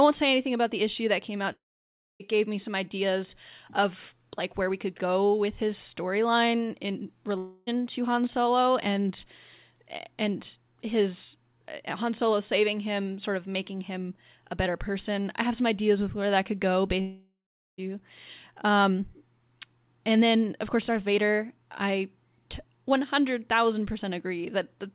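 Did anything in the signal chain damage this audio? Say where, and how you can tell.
Yes, at the network stage, likely as long network dropouts, in three places. At 1.52 to 2.22 s, after "issue that came out", about 0.68 s of speech is missing. The last sound is stretched into a fading buzz before going quiet, and the audio resumes at "gave me some ideas". The same happens at 17.01 to 17.80 s, after "where that could go", with about 0.78 s lost. At 7.38 to 7.69 s, after "with his storyline in", a 0.3 s gap is covered only by the decaying fill. The receiver's concealment filled these gaps, but the lost speech never returns. The narrowband G.711-style call path, with nothing above 4 kHz, carries the audio on either side.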